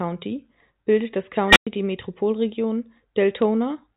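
Right after "bildet das", at 1.48 s, a squeal around 2 kHz swells within 75 ms, clips, then drops to silence for 107 ms, until 1.67 s. This is an unstable filter: bad coefficients let its recursive output run away until it overflowed and reset.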